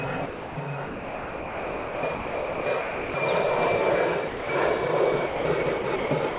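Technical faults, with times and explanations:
0.26–0.56 s, sound dropped by the voice detector: sound gives way to steady comfort noise for 300 ms, likely because the sender's detector classed it as background.
0.86–3.14 s, sound chopped by the voice detector: transmission likely switches repeatedly, with about 2.01 s replaced by comfort noise, so the sound turns choppy.
4.28–4.49 s, sound dropped by the voice detector: 210 ms of sound is replaced by synthetic noise, likely from the detector stopping transmission before resuming.
5.27–6.39 s, sound chopped by the voice detector: on-off gating replaces about 520 ms with comfort noise, likely detector switching, over band-limited audio with nothing above 4 kHz.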